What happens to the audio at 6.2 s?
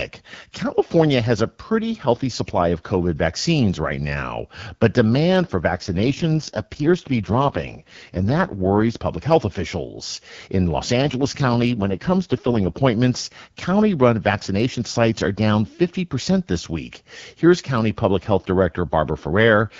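At 6.2 s the clip is inside an AMR rate drop from 5.74 to 8.98 s. The network has pushed the AMR-WB codec to a lower mode and spent the freed bits on error protection, and the sound points to a fall from 12.65 to 6.6 kbit/s. The bandwidth and continuity hold, with no gap, but the speech turns rough, raspy and synthetic until the higher rate, with its lightly coded wideband quality, returns.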